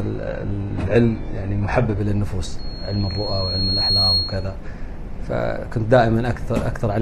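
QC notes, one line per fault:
0.0 to 2.0 s, adaptive stream starting at a low bitrate: the opening sounds thin and swirly, with nothing above 11.4 kHz and heavier codec smearing, which fits a player opening on a tiny HE-AAC rung around 12 kbit/s so it can start fast. At 2.0 s the quality jumps up without any gap, pointing to a switch to something like AAC-LC at 96 kbit/s once the player had measured the connection.
2.58 to 4.56 s, loudspeaker feedback squeal: a single tone at 4.3 kHz swells up over about a second and a half until it sits roughly 5 dB above the rest of the audio. It's the classic loop, where a mic hears its own speaker and the gain around that loop tops one at that frequency, so the tone keeps feeding itself. It stops at 4.56 s, as if the loop were broken.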